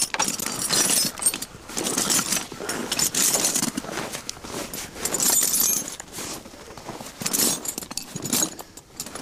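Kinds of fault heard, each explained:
Block of digital silence: right around 0.41 s the audio drops to silence for about 15 ms and then comes straight back, with no fade on either side. That sort of gap usually means the output buffer wasn't filled in time, so the hard cut out and back in puts a sharp edge at each end. At this length it's too short to register as a hole, so what you get is a quick tick or small pop.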